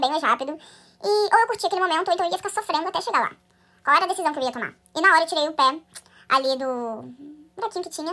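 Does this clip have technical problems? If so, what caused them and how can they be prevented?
Yes, there's a wrong sample rate problem running through the whole clip. The speech plays about 1.5 times too fast and sits roughly 7 semitones high, so it comes across as hurried and chipmunk-like. Speed and pitch moving together by the same ratio points to 16 kHz audio being played back at 24 kHz with no conversion in between. To prevent it, make sure the playback rate matches the file's actual rate, or resample properly before playing.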